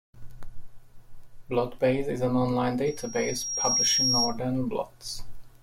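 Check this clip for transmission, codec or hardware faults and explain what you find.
One fault, a loudspeaker feedback squeal, from 2.86 to 4.39 s. The microphone re-amplifies its own loudspeaker until a 5.6 kHz tone swells over about a second, ending a few decibels above the speech.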